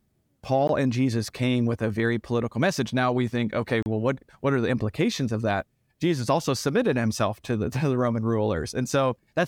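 At 0.67 s the speech drops out for about 17.6 ms, a gap at a join of encoded pieces. Two separately encoded sections were butted together without trimming, so the encoder's start-up delay and the padding on the final frame both remain as silence. The edges are smeared by the codec, and the speech resumes where it stopped. The same fault recurs from 3.83 to 3.86 s, this time a 35 ms hole.

From 0.95 to 1.80 s there are five CD scratch ticks, about six a second, none much longer than a millisecond. A blemish on the disc corrupts more data than error correction can recover, once per revolution, and the player interpolates across or mutes the damaged samples. The result is a short run of evenly spaced clicks over the speech.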